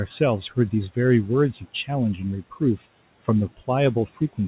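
Between 1.54 and 1.89 s there is speech cut by the noise suppressor. It mistook part of the speech for background and turned it down by up to about 11 dB, roughly a tenth of a second in total, leaving those sounds swallowed and faint.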